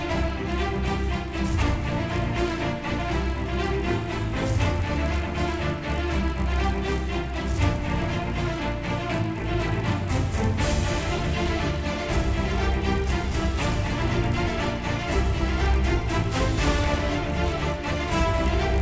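A steady 50 Hz buzz rides under the sound throughout. The resampler restarted on every block, leaving errors at each 20 ms block edge.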